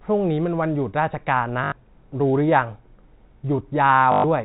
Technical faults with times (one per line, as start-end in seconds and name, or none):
1.64-1.72 packet loss with last packet repeated
4.12-4.24 packet loss with last packet repeated